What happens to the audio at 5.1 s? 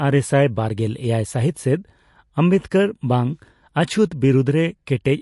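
At 5.1 s the speech still carries the swirly, watery texture heard throughout, and nothing remains above 11.3 kHz, likely from MP3 compression at a low bitrate near 48 kbps. Weak frequency lines flicker between frames, which a plain low-pass filter would not cause.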